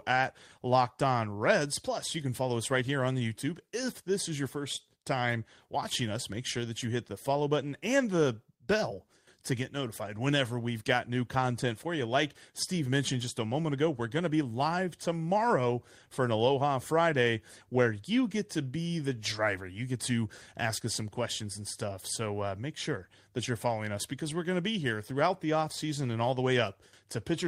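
No technical fault can be heard anywhere in the speech recording. There are no events to place in time.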